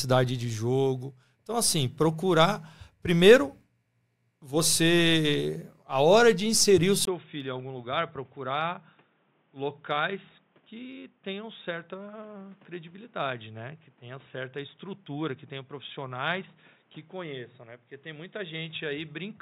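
At 7.05 s there's a tiny gap, about 20 ms, and from there to the end the sound turns boxy and dull, with nothing above 3.8 kHz, a level drop of roughly 10 dB, and a new, faint noise floor sitting well under the signal. That combination of narrower band, different tone and fresh background is the classic sign of the input switched to a poorer device, likely a fallback microphone or a headset's call profile taking over mid-recording.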